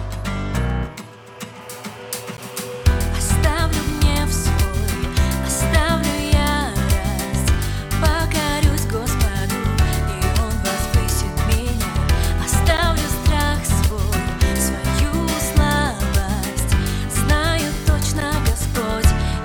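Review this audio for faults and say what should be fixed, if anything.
The audio path missed its deadline three times and left whole output blocks of digital silence, each about 11.6 ms long, which fits a 512-sample buffer. The sound drops to silence and returns with no fade, giving brief ticks at 2.37, 12.77 and 18.2 s. Preventing this means giving the audio thread more headroom, either with a larger buffer or with lighter processing per block.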